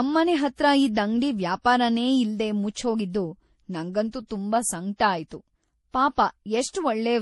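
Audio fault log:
throughout: transcoding between lossy codecs. The speech was likely encoded as MP3 and then re-encoded as Vorbis, both at low rates, near 48 and 38 kbit/s. The second coder wastes bits on the first one's artefacts, so two kinds of smeared, swirly distortion overlap, and nothing remains above 11.5 kHz.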